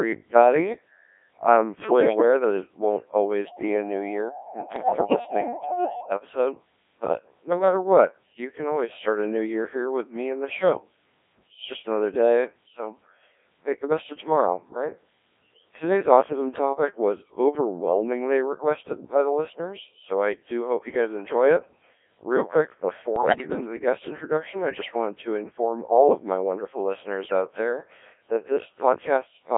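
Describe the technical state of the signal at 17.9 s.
At 17.9 s the speech is passing through the Codec 2 vocoder, as it does for the whole clip. No original waveform survives. The decoder rebuilds the voice from sine waves driven by transmitted pitch, voicing, energy and a coarse spectral envelope, and the damage is heavy, consistent with a rate near 1.3 kbit/s. The result sounds robotic and buzzy, confined to a band of 250 Hz to 3.5 kHz.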